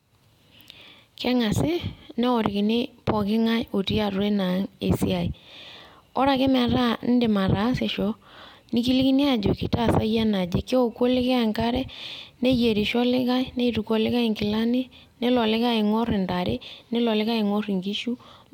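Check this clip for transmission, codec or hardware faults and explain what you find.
The signal holds steady and continuous throughout, with nothing audible that traces back to how the audio was carried, encoded or captured.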